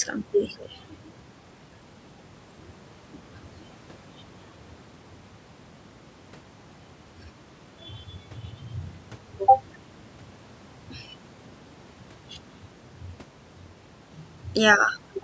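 No technical faults are audible.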